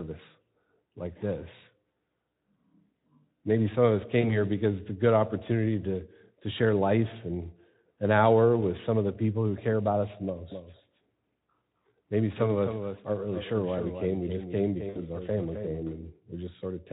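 At 4.21 s there's a short hiccup from VoIP packet loss concealed by the speech codec. Roughly 20 ms of audio went missing. The decoder patched the gap by extrapolating from the last pitch and filter state and fading it out, so you hear a brief buzzy or noisy smear. The speech stays a bit weak until about 4.38 s while the decoder's state recovers.

From 10.52 s to 15.80 s there's a doubled audio track. A second copy of the speech trails the original by about a third of a second, roughly 10 dB quieter. It's full-band and dry, with no room tail, and it cuts in and out abruptly at those two times. The likely cause is the same signal being picked up again through a slower path, or an edit that left two copies out of step.

Inside that stretch the packet loss shows up twice more. At 12.95 s about 20 ms drops out, with a short blip lasting to about 13.01 s. At 14.89 s about 60 ms is lost, so the concealment has to stretch further. 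It turns into a longer, fading buzz or noise through about 14.98 s.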